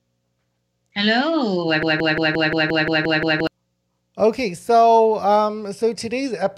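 From 1.83 s to 3.47 s the speech falls into a broken-record loop. A fragment about 175 ms long repeats exactly, back to back, nine times. The audio that belonged there is lost. A stalled player or stream replaying its last buffer is the likely cause.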